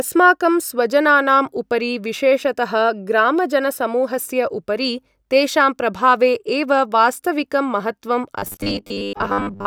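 From 8.39 s to 9.66 s, the speech collapses into robotic sound from repeated short buffers. It becomes a rigid, metallic buzz pitched at 100 Hz that still loosely tracks the syllables. The likely cause is audio arriving too slowly for playback, so the software keeps looping the most recent 10 ms block. That fits the 100 Hz buzz. For most of this stretch, the looped block stands in for the real signal, which is skipped.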